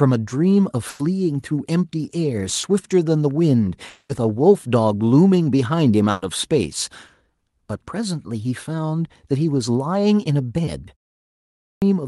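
Right at 0.89 to 1.01 s there's a burst of packet loss: the receiver stretches the last sound for about 100 ms, fading it, then jumps ahead past the missing bit. Around 2.61 to 2.65 s comes a short concealed packet loss, a quick smear where about 20 ms got patched over, and you'll hear the same thing again at 7.07 to 7.11 s and 10.65 to 10.69 s. Between 3.89 and 4.11 s the sound turns into a fading buzz or hiss for roughly 200 ms before picking up further on, likely a long network dropout. Another burst of packet loss hits at 6.11 to 6.23 s, with that same held-and-faded tail for about 100 ms. Finally, after a 0.34 s pause, there's a clipped start after a pause at 11.22 to 11.82 s: the output swallows about 0.6 s, so the sound snaps in abruptly, missing its opening. The top end stops around 12 kHz throughout, which fits the Opus call path.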